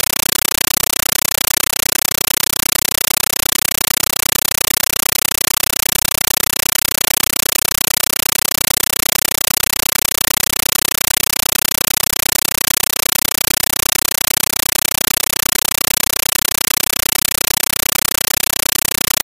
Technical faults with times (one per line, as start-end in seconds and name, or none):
0.00-19.23 compressed stream played as audio